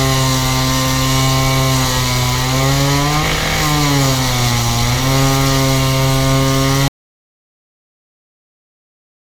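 At 6.88 s there's an audio dropout to silence: everything cuts to silence, no room tone, right through to the end, likely from the input being lost.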